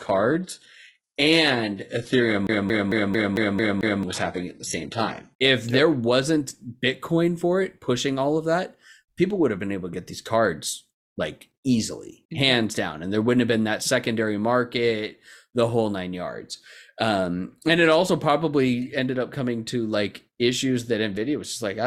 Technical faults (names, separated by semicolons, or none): adaptive stream starting at a low bitrate; CD stuck on one turn